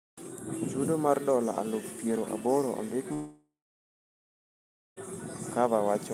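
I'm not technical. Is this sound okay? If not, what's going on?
No. At about 3.13 seconds the connection likely stopped delivering audio, a long network dropout lasting until about 4.98 seconds. The receiving end tried to cover the gap by stretching out the last bit of speech into a brief fading buzz, then gave up, leaving about one and a half seconds of silence. When the speech returns, nearly two seconds of it are simply missing and never come back.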